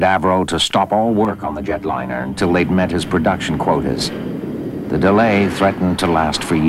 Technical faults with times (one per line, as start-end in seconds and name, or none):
1.25-2.40 channel delay (comb filtering)